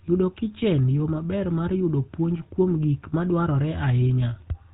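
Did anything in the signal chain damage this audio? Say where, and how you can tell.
Yes. The damage happened at the codec stage: this speech has been through the GSM full-rate codec for its whole length. Nothing comes through above 4 kHz, so the sound is dull and boxed-in. The codec models the vocal tract and drives it with a coarse, regularly spaced pulse train, keeping only a third of the excitation detail. That pulse grid is what gives this codec its typical buzzy, gravelly roughness. The degradation is plainly audible and fits the 13 kbps full-rate codec.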